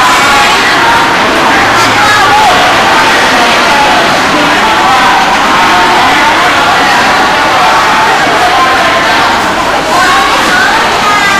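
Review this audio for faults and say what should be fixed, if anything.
Hard clipping runs the whole way through: the signal is pushed about 14 dB past what the chain can pass, so roughly a fifth of the samples get sliced flat, and those squared-off peaks throw up high harmonics that turn every loud moment into harsh fuzz. To prevent it, pull the gain down before the converter or fixed-point stage so peaks sit comfortably below full scale.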